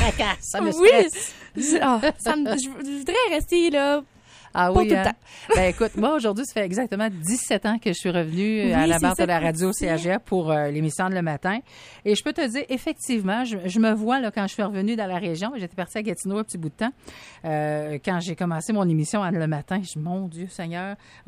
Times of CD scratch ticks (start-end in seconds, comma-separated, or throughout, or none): 2.72-3.22